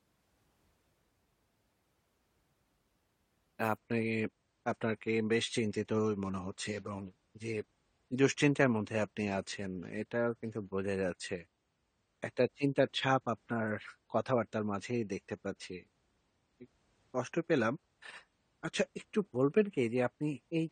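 At 3.77 s the speech drops to a lower-bitrate version of an adaptive stream, and stays there to the end. There is no gap. The treble suddenly stops at 9 kHz and codec artefacts rise, which fits a fall from roughly 96 to 32 kbit/s.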